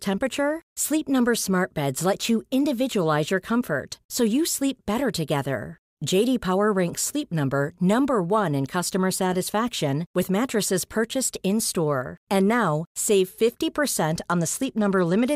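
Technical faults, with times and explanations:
14.18–15.35 s, Bluetooth SBC bit pool drop: over the last second or so the speech suddenly loses its treble and takes on a gritty, grainy noise. The sound fits the link's bit pool falling from about 28 to about 13, near 100 kbps, so the upper sub-bands are starved and the rest coarsely quantised. On a spectrogram the energy above the mid range thins or blanks out, with speckled noise filling the lower bands. The waveform barely changes.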